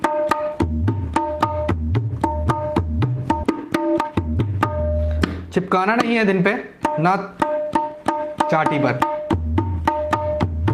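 At 3.43 to 3.45 s the audio makes a skip ahead: roughly 0.7 s of material is dropped and the two sides are butted together with no silence filling the join, which separates it from a dropout, where a gap or fade would mark the loss. From 3.58 to 5.21 s a jitter buffer speed-up follows. The receiver trims short pitch-period slices to shed the delay that built up, about a third of a second in total, so the sound runs at 116% speed and feels hurried while its pitch stays unchanged, unlike a resampling error, which would raise it.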